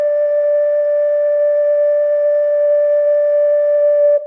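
No technical faults can be heard in this music clip. There is no moment in the recording that needs a time mark.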